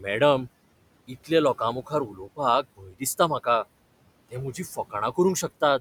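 A speech recording in which the background noise sinks away in the pauses and swells back up beneath each phrase. These are noise suppressor artifacts: the processor works frame by frame, pulling down whatever bands it judges to be steady noise by about 21 dB. The room noise, sitting about 19 dB below the speech, is therefore pumped up and down rather than held steady. In three places the speech itself dips and sounds swallowed, from 1.08 to 1.31 s, from 1.82 to 2.39 s, and from 2.63 to 3.02 s just before "दिसता म्हाका", with drops of about 14, 15 and 18 dB. This is speech cut by the noise suppressor. Quiet stretches of the talker were mistaken for background and turned down with it, so within each window short pieces, around a tenth to a third of a second in total, go faint and lose their softer detail.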